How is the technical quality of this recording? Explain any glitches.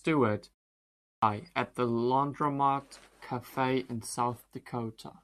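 The recording has one glitch: a clipped start after a pause at 0.87 s. After a 0.41 s stretch of silence, the output device had gone to sleep and needed time to wake and lock again. Playback resumed only at 1.22 s, so the first 354 ms of the speech after the pause was swallowed. The phrase bursts in abruptly out of silence, missing its opening sounds, rather than starting naturally.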